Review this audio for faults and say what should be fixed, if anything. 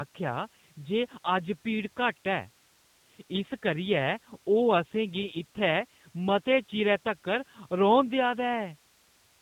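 G.729 codec damage runs throughout: the speech has no energy above 4 kHz and sounds rough and synthetic, consistent with an 8 kbit/s G.729A stream. Prevent it by carrying the call over a wideband or higher-bitrate codec.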